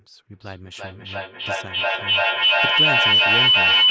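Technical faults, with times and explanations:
0.33 to 3.91 s, feedback howl: a second device in the room re-captures the call's loudspeaker output and sends it round again about every 0.3 s with gain each pass, so a tone near 3 kHz swells to about 14 dB above the speech.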